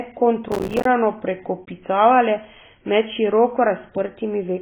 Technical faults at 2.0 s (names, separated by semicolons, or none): AAC compression